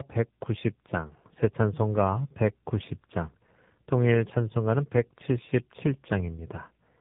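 From start to finish the speech carries tandem speech coding: two low-rate speech coders in a row, the second re-encoding the first's already damaged output, which fits GSM full rate followed by AMR-NB at 7.4 kbit/s. Nothing survives above 3.8 kHz, and the speech sounds rougher, more muffled and more warbly than one such coder alone would make it.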